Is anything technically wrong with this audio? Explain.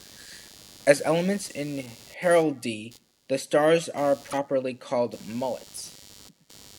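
Yes, there are two faults. Throughout the recording there is computer activity noise. Changing load in the computer's processor, graphics hardware or mouse disturbs the ground that the audio circuitry shares, and that current leaks into the signal. The result is a buzzy, pulsing interference repeating roughly 100 times a second, sitting about 25 dB below the speech. It rises and falls with what the computer is doing, not with the talker, so it stays audible in pauses.

From 4.29 to 4.34 s there is damaged data in a compressed stream. Some of the encoded bytes at that point are corrupt, so the decoder cannot read those frames properly, loses its place and has to hunt for the next valid frame header before playback resumes. This produces a short, unnatural chirp, squawk, click or gap of about 50 ms that does not belong to the speech.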